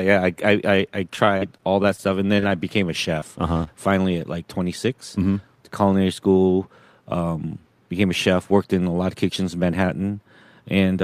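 Packets were repeatedly lost or arrived too late between 1.15 and 2.53 s of this speech recording, producing repeated packet loss with a robotic sound. Nine separate holes opened in that stretch, the longest 42 ms. Each was patched by extending the preceding audio, so roughly 13% of the span is synthetic fill and about 100 ms of real speech never arrives. With the gaps so close together, the voice turns choppy, with fragments dropping out. Shortly after, two isolated cases of short concealed packet loss occur, at 3.20 to 3.24 s and at 3.64 to 3.68 s. In each, about 20 ms of audio failed to reach the decoder, and the receiver bridged the hole by continuing the last sound, following its pitch where voiced and using shaped noise otherwise, before blending back into the real signal. Each is heard as a brief smear or wobble, and a short consonant there may disappear. Between those two, from 3.54 to 3.58 s, a late packet caused a short stall. 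The jitter buffer ran dry, so the receiver held the last sound for about 24 ms until the packet turned up and then resumed exactly where it had stopped. No speech is lost, but one sound is drawn out with a faint buzz or dip. Later, from 7.92 to 8.34 s, the jitter buffer held more audio than its target and applied a jitter buffer speed-up. It trimmed short pitch-period-length slices again and again, around 40 ms in total, to pull the delay back down. The pitch stays the same, but the speech plays at about 108% speed and sounds hurried for that half second.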